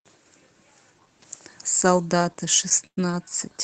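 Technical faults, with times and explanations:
2.87 to 2.99 s, call audio freeze: The sound halts and its last moment is stretched into a short, fading buzz or hiss, ending in about 80 ms of silence. Packets were likely delayed, emptying the jitter buffer. Nothing is lost. The audio resumes where it stopped, 104 ms late.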